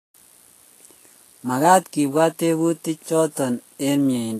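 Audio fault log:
Throughout: Vorbis compression. The speech has a hissy, grainy treble, and its tones sound roughened. Consonant onsets are softened and smeared. Nothing is heard above 14.2 kHz, so the highest treble is missing. The likely cause is low-bitrate Vorbis coding, which fits a rate near 33 kbps. At that rate the encoder cuts off the highest band. It also quantises the remaining upper detail so coarsely that the detail becomes noise of similar energy. The damage is plainly audible.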